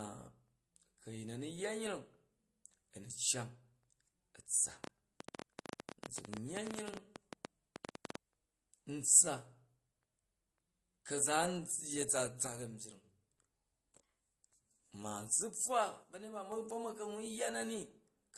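The whole clip carries the sound of transcoding between lossy codecs. Everything above 12.2 kHz is gone, and the speech carries two different sets of artefacts sitting on top of each other. That layering fits a likely chain of an MP3 at around 48 kbit/s re-encoded to Opus at around 32 kbit/s. The second encoder wastes bits reproducing the first one's damage while adding its own, and the lower cut-off from the chain is the one that stays.

From 4.84 to 8.16 s there's a train of clicks, around forty sharp ticks at roughly 11 per second. The spacing is irregular, so it sounds more like sputtering than a steady tick. The clicks poke out well above the speech, at about 15 dB over it, and they're heard in the gaps too. Since they all have much the same shape, the likely cause is interference or a faulty connection or power supply.

Then there are two spells where one channel drops out, from 12.47 to 13.04 s and again from 16.03 to 16.52 s. 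In each, the level falls abruptly by about 6 dB and snaps back at the end, which is what happens when a mono sum suddenly has only one side feeding it. The likely cause is one stereo channel briefly cutting out for those half-second stretches.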